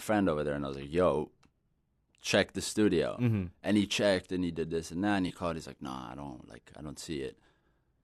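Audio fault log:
5.27–5.31 s, corrupt frame concealed: right after "this and that and", the speech is disrupted for about 34 ms. The length points to a single damaged AAC frame. The decoder detected the bit errors and covered the frame itself, either muting it or substituting a scrambled copy of the preceding spectrum.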